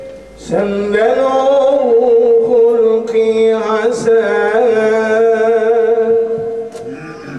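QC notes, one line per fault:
No faults detected.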